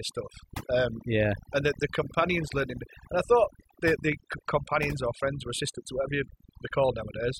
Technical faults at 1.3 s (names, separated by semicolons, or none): overdone noise removal